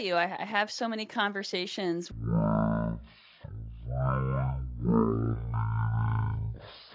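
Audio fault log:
2.12–6.95 s: wrong sample rate. The speech drops to one third speed and 19 semitones lower, which fits 48 kHz audio played at 16 kHz without conversion. On a spectrogram, harmonics and formants sit at a third of their height and stretch threefold in time.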